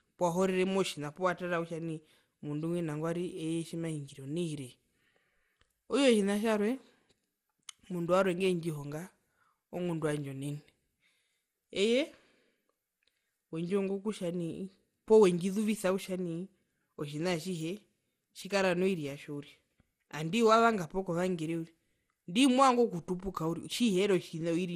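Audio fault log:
throughout generation loss: the speech was likely re-encoded around ten times as MP2 at 96 kbit/s, piling up errors that leave it swirly, hollow and smeared, nothing above 15.9 kHz.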